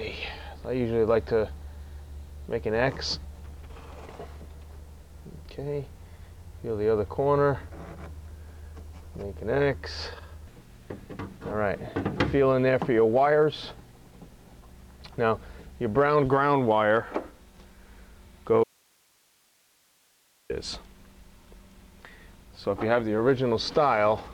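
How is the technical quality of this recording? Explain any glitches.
One glitch stands out: an audio dropout to a faint residue from 18.64 to 20.50 s. The sound cuts off abruptly mid-flow, and for about 1.86 s all that remains is a thin bed of hiss, roughly 40 dB below the normal level. Then the signal snaps straight back. The likely cause is a brief loss of the wanted signal upstream while the rest of the chain stayed live, passing along only its own noise. The hard edges at both ends, with no taper, set it apart from a natural pause or a fade.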